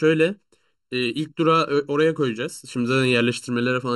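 Throughout the speech, channel delay produces comb filtering. One channel trails the other by under a millisecond, so summing to mono cancels shared content at evenly spaced frequencies, the first near 700 Hz. It sounds hollow and phasey. Unlike flanging, these notches stay fixed.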